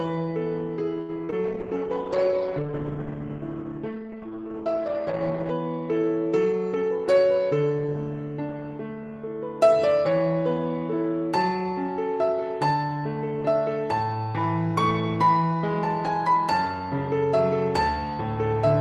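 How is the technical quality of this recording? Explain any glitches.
The recording has four kinds of network-related glitches, all within roughly the first seven seconds.

From 1.01 to 1.11 s the sound hangs, held about 73 ms too long. This is a short stall from a late packet: the jitter buffer ran dry, and the receiver stretched the last sound until the packet arrived. Nothing was lost, but everything after it runs 73 ms later.

At 1.25 to 1.30 s and again at 1.30 to 1.34 s there is a quick smear. This is short concealed packet loss: about 40 ms and then 20 ms of audio never arrived, and the decoder extended the preceding sound to bridge each gap.

From 1.46 to 5.86 s the audio turns muffled and rough. The top end stops at 8 kHz instead of reaching 20 kHz. This is a call bitrate drop, consistent with the encoder falling from roughly 32 to 10 kbps and staying at the lowest rate for about 4.1 s. 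It codes coarsely and discards the highs.

From 6.45 to 7.06 s the sound briefly rushes, playing about 11% fast while keeping its pitch. This is a jitter buffer speed-up: the receiver trimmed many tiny pitch-period slices, roughly 70 ms in total, to reduce the extra delay built up in the buffer.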